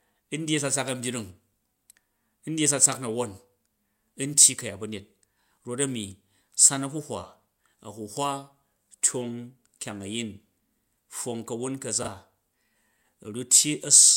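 Frames out of order occur at 12.02 to 12.08 s, where two neighbouring stretches of about 24 ms each were decoded in swapped order. This fits two adjacent codec blocks trading places. The later sliver of speech plays before the earlier one, producing a brief garbled flutter. Nothing is dropped and no time is lost: the same audio is present, only rearranged within that short window.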